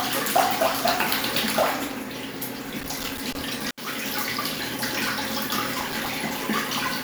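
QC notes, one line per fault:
2.63–3.42 s and 5.80–6.07 s, loose connector crackle: a worn contact repeatedly breaks and remakes, chopping the signal, which produces irregular scratching bursts. On the waveform there are ragged dropouts and spikes, and on the spectrogram broadband vertical streaks.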